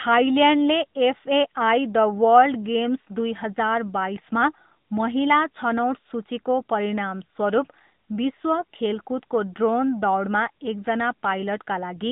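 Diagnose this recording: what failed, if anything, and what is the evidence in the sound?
The failure is at the codec stage: the speech has passed through the AMR narrowband mobile codec for the whole clip. Nothing reaches above 3.8 kHz, and the usable band runs roughly 150 Hz to 3.7 kHz. A plain band-limiting filter would sound merely dull. Here the voice also has a plainly audible buzzy, synthetic edge, because it is rebuilt from a vocal-tract model and sparse excitation pulses. The degree of damage fits a bitrate around 10.2 kbps.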